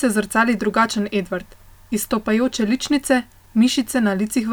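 No technical faults can be heard in this recording.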